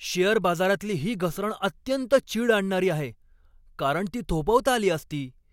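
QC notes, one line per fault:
No faults heard anywhere in this speech clip.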